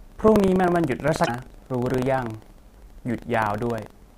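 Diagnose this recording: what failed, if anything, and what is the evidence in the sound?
The failure is at the driver or buffer stage: buffer tearing. The application filling the ring buffer and the hardware draining it have drifted, so their positions cross inside every period. A small slice of each buffer, only a few percent, still holds audio from roughly 70 ms earlier, with hard joins on both sides. The speech therefore carries a continuous robotic buzz at 25 Hz, which fits a 40 ms period, and the buzz is present only while there is signal.

The second failure is at the codec or storage stage: damaged data in a compressed stream. Between 1.24 and 1.29 s, about 50 ms of the encoded stream is corrupt. The decoder misreads or rejects the frames there, loses sync, and hunts for the next valid frame header. That produces a short chirp, squawk, click or hole in the speech at that point, and it is separate from the steady buzz.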